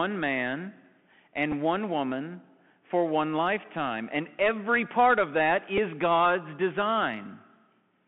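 From the start, the speech carries a Bluetooth CVSD headset codec sound. The band runs from about 150 Hz to 3.4 kHz. Nothing higher survives. The coder sends one bit per sample, only up or down, with an adapting step. That fits a 64 kbit/s link. The damage is plainly audible. Fast, loud rises outrun the step and smear. Sibilants turn rough. A grainy hiss sits under the speech throughout.

At 1.52 s, a Bluetooth headset packet is repeated. Lost audio was filled by decoding the previous packet's bits again. The gap is 7.5 ms, which fits two missing packets. It sounds like a brief buzzy tick. At 5.78 s it happens again, over 3.8 ms. That fits a single lost packet. This one is a smaller click.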